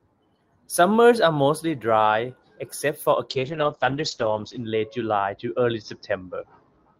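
From 3.31 s, a call bitrate drop makes the speech rough and watery. The top end shrinks from 20 kHz to 8 kHz, pointing to roughly 32 falling to 8 kbps. Unlike packet loss, nothing drops out.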